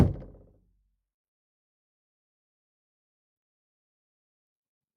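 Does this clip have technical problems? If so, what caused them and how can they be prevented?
No, nothing technical goes wrong in this one, so there's no problem here to trace back or prevent.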